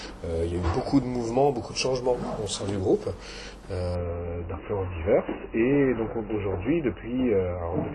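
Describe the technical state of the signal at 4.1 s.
At 4.1 s the signal is in a stretch of adaptive stream at a lower bitrate, running from 3.95 s to the end of the clip. The player has switched to a far leaner encoding, roughly an MP3 step from 128 kbit/s down to 16 kbit/s, so almost nothing survives above 3 kHz. The sound turns dull and muffled, with swirly, watery codec artefacts. The drop arrives abruptly, with no gap in playback.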